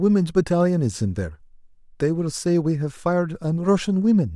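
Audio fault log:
Nothing stood out on listening through the speech in this clip.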